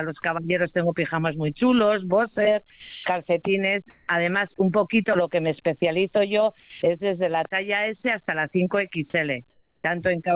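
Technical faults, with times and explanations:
0.22–0.24 s, 2.7–3.06 s, 5.8–5.82 s and 6.6–6.82 s: sound dropped by the voice detector. Real sound gives way to steady synthetic noise for 20, 360, 20 and 220 ms, costing 10, 230, 10 and 170 ms of actual content. The likely cause is a voice detector mistaking that sound for background. Unlike a background swap, audible material is missing.
3.9–4.08 s and 9.5–9.84 s: comfort noise in place of the background. In pauses where the background sits about 45 dB below the loudest sound, the detailed ambience becomes a flat, featureless hiss. It is about 12 dB louder at 3.9 s and about 3 dB quieter at 9.5 s, likely from discontinuous transmission. No content is cut, only the background texture.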